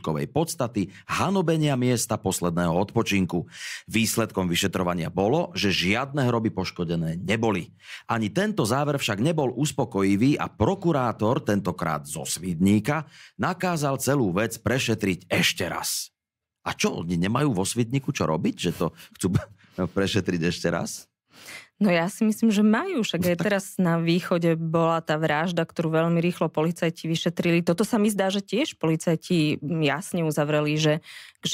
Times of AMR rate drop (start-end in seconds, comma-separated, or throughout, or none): none